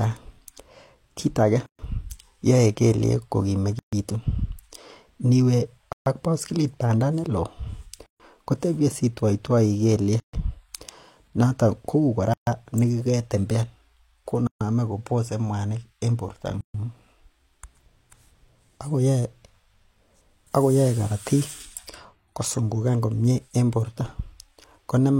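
The speech keeps dropping out at regular joins. A gap at a join of encoded pieces opens at 1.66, 3.79, 5.93, 8.06, 10.2, 12.34, 14.47 and 16.61 s, one every 2 s. The first lasts about 129 ms and the rest about 136 ms, so "yoe kelyeeg", "baskilit bandaa neloo" and "kobose mwanik en borto" are each followed by a short silence. Two-second chunks were encoded separately and joined untrimmed, leaving encoder delay and end padding in place. Each hole has smeared edges, then the sound carries on from where it stopped.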